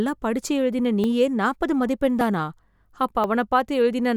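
At 1.04, 2.21 and 3.24 s the speech jumps with roughly 10 ms missing, likely a dropped buffer (overrun) each time. Unlike an underrun, no silent gap appears: the audio on either side is spliced directly together.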